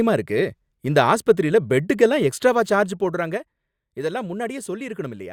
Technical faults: zipper noise

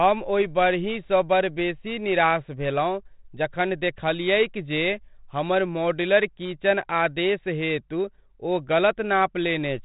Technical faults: none

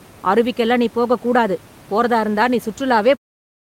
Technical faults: none

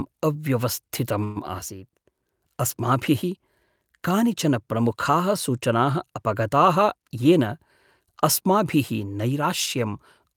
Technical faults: call audio freeze; jitter buffer speed-up

